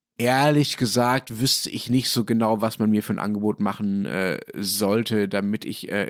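No technical faults can be heard anywhere in the speech. Nothing in the recording needs a timestamp or an explanation.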